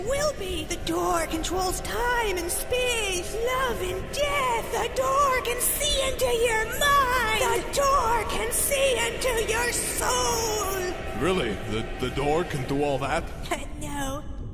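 No technical faults can be heard anywhere in this audio, and the signal holds steady throughout.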